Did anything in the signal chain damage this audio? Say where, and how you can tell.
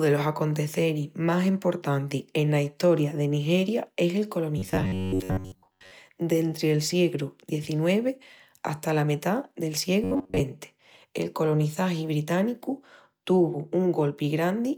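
Yes. A rigid, metallic buzz at 93.8 Hz runs through the speech from 4.58 to 5.91 s, after "es el", and from 10.04 to 10.40 s, after "hata la metá del". This robotic sound from repeated short buffers likely comes from a driver or buffer underrun looping chunks of about 10.7 ms in place of most of the real audio.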